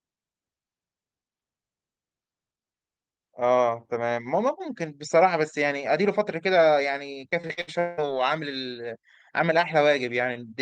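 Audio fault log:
7.29 to 7.99 s, repeated packet loss (robotic sound): over this stretch the speech keeps dropping out in six separate gaps, the longest about 183 ms. Each hole gets papered over by stretching the last bit of sound forward, and roughly half the span ends up as patched-in audio rather than the real thing. Because a new gap arrives before the last one settles, the voice turns choppy, with pieces of the speech missing.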